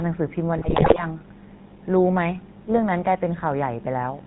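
Speech heard through a buzzy, gravelly filter runs the whole clip, with nothing above 4 kHz and a rough, pulsed texture on every syllable. That is the GSM full-rate codec, plainly audible here and consistent with a 13 kbps full-rate stream. It models the vocal tract, drives it with evenly spaced pulses and keeps only a third of the excitation samples, so the voice loses its upper band and takes on a mechanical graininess. From 0.58 to 1.04 s the sound breaks into squawks, pops and gargling, with the level jumping from moment to moment. These are GSM bit errors. Corrupted bits reached the decoder, and the way the whole half-second falls apart points to a few percent of bits flipped across roughly twenty frames. Damaged filter, pitch and gain values bend the spectrum and blow up the level frame by frame.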